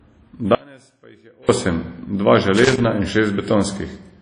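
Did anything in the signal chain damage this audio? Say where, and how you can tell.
Yes, three separate problems. The first runs the whole way through and is most likely a codec stage: WMA compression at a low rate, something like 32 kbps. There's nothing above about 10.1 kHz, and the speech has that ringing, washy quality with hiss that swells and shrinks along with the signal. Long transform blocks smear the quantisation noise over tens of milliseconds, and at this rate the weaker spectral detail just gets zeroed out.

Then there's an audio dropout to a faint residue from 0.55 s to 1.49 s, roughly 940 ms, ending right before "osem dva". The speech cuts out abruptly rather than fading or pausing, and what's left in the gap is a faint trace sitting about 30 dB below normal level. That suggests the source feed was lost while everything downstream stayed live, most likely a break somewhere upstream in the transport or capture path, not a true silence.

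Last, there's loose connector crackle in the analogue wiring from 2.57 s to 2.85 s, just after "osem dva". It's an irregular burst of scratchy crackle, not a steady tone or a clean click. That's a worn or dirty contact making and breaking quickly as it shifts. It chops the signal into fragments, and any DC on the line turns each break into a little pop.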